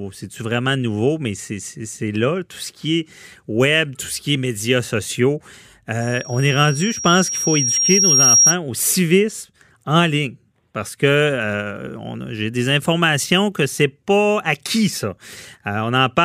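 Right after "qui est médias sociaux", at about 6.01 s, a loudspeaker feedback squeal kicks in and runs until 8.56 s, ending just before "au civisme en ligne". The mic is picking up the speaker it feeds, and around 5.6 kHz the loop gain tops one, so that tone feeds on itself. You hear a thin whistle swelling over roughly two seconds until it sits about 10 dB above the speech.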